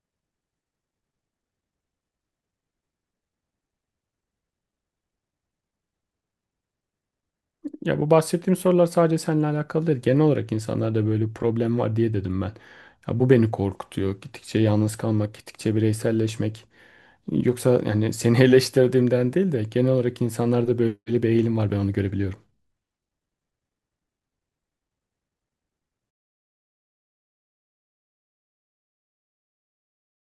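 From 26.11 s to the end at 30.31 s, the speech fade-out shows truncation distortion on a fade. The fade itself starts around 26 s, but the gain stage cuts the samples to very few bits with no dither, which fits roughly 7-bit resolution. As the level falls toward the smallest step, the waveform becomes coarse stairs, so the tail turns gritty.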